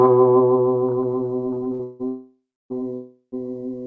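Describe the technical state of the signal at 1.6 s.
At 1.6 s the music is in the middle of a run of repeated stalls (stutter), 1.28 to 2.01 s: the jitter buffer keeps running dry, so the receiver stretches the last sound five times, the longest hold about 160 ms, and the passage drags and hiccups.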